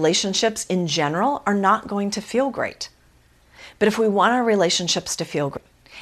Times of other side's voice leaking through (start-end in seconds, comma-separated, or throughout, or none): none